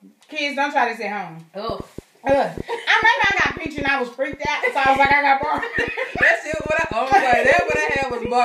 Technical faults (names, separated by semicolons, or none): train of clicks